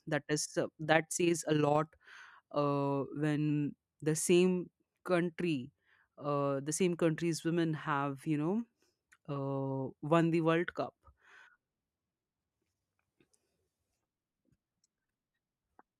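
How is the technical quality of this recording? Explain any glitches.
One glitch stands out: overlap-add ripple from 0.84 to 1.79 s. The speech was framed, windowed and rejoined with overlaps that don't sum evenly, so the level pulses about 6 dB around 30 times a second, a rough robotic flutter. Unlike dropouts, the level never falls silent.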